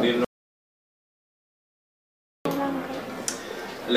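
At 0.25 s the input signal was likely lost, perhaps through a disconnected device or failed link, while recording carried on writing zeros. This is an audio dropout to silence: the sound cuts off abruptly into dead silence with no room tone, returning mid-flow at 2.45 s after 2.21 s missing.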